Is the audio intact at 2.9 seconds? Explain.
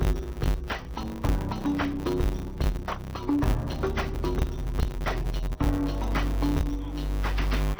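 No. At 2.9 seconds, as across the whole clip, the audio suffers from interleaved audio read as planar. Each 10 ms block of alternating left and right samples is split wrongly, so the first half feeds one channel and the second half the other, each stretched to fill the block. With blocks this short the sound is dull and robotic, buzzing at 100 Hz with no clear octave drop. A spectrogram shows harmonic smearing and a 100 Hz comb, and the waveform shows 10 ms discontinuities.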